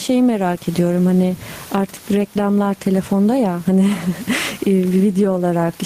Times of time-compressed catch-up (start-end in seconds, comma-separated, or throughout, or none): none